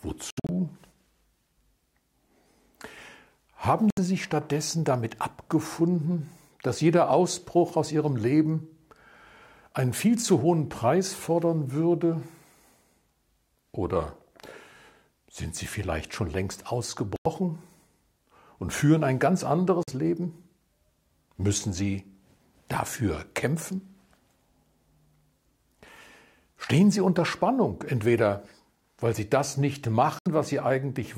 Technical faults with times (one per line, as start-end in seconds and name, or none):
0.30-0.50 Bluetooth dropout
3.90-3.99 Bluetooth dropout
17.16-17.27 Bluetooth dropout
19.83-19.90 Bluetooth dropout
30.19-30.28 Bluetooth dropout